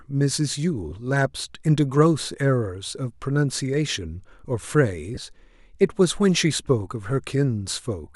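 It's a speech clip with three brief losses of LE Audio frames: short hissy smears at 0.91 s and 6.68 s, about 10 ms each, and a longer one from 5.15 to 5.17 s, about 20 ms, which suggests two frames. The LC3 decoder filled each gap by replaying the last spectrum with scrambled signs.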